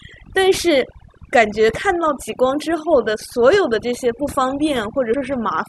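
From the start, overdone noise removal is heard. The noise reducer was set too strong. It pulls frequency bands down whenever they sit near its noise estimate, and quiet parts of the voice vanish with them. The background drops and breaks up into twinkling specks.

At 5.14 s, compressed frames are skipped. Roughly two frames never play, so the audio jumps ahead by about 70 ms. That fits 32 ms frames.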